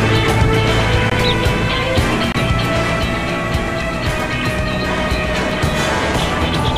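At 1.10 s the audio drops to a block of digital silence about 17 ms long, then at 2.32 to 2.35 s a second one of about 23 ms, which fits a lost 1024-sample buffer. A third, only 2.4 ms, falls at 5.51 s. In each case the samples are replaced by zeros with no fade in or out. The two longer gaps read as brief holes, and the last as a single tick.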